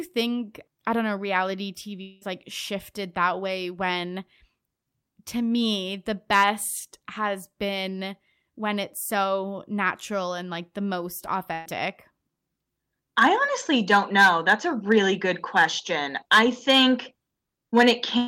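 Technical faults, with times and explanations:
2.01 to 2.23 s, long network dropout: roughly 200 ms of the speech is simply gone, papered over by a smeared continuation of the previous sound that never drops to silence. That's likely a stall in the incoming stream, with concealment covering the hole.
11.53 to 11.67 s, burst of packet loss: about 120 ms of speech never made it through, so the receiver stretched the last sound across the gap as a fading buzz or hiss, then picked up further along with that stretch missing.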